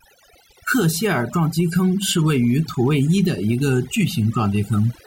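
Overdone noise removal runs throughout the speech: an overly aggressive noise reducer cut bands near its noise estimate, leaving twinkling near-silence between phrases.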